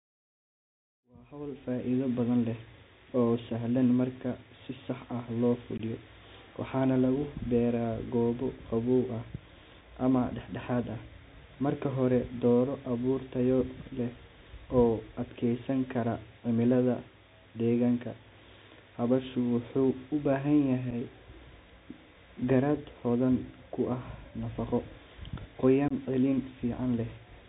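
The speech passes through a Bluetooth CVSD headset codec throughout, which fits a 64 kbps link. Nothing above 4 kHz survives. S sounds turn scratchy over a granular hiss. After the fade-in ends at 2.34 s, unconcealed Bluetooth headset packet loss punches abrupt holes: 5.78 to 5.81 s after "ah loo", scattered at 20.91 to 20.94 s, and 25.88 to 25.93 s.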